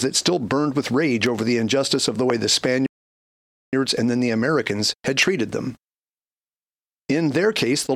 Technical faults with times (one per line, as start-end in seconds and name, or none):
1.26-1.41 loud pop
2.30-2.32 loud pop
2.86-3.73 rebuffering stall
5.23-5.25 loud pop